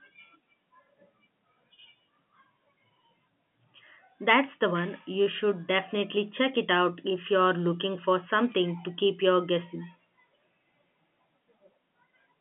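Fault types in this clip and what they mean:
Nothing's wrong here; it's speech carried over ordinary G.711 telephone coding, so the band runs from roughly 150 Hz to 3.5 kHz with nothing above about 3.7 kHz, just as a phone line should sound.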